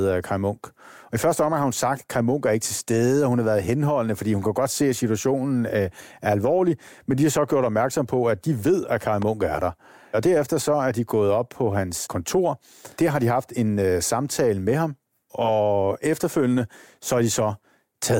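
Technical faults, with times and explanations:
9.22–9.25 s, loud pop: a single sharp pop cuts in for about 23 ms, just before "er der", peaking a few decibels above the surrounding speech while the talking carries on beneath it. The cause is likely a sudden voltage step or spike entering the chain from a connector, switch, static discharge or driver glitch. The circuitry downstream turns that step into a brief, hard-edged pulse, which the ear hears as a pop.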